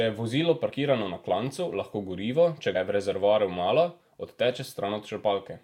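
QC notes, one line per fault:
0.71 s and 2.74 s, compressed frames skipped: the speech lurches forward, losing a few tens of milliseconds each time. A small run of coded frames was never decoded, so the audio jumps ahead by their length.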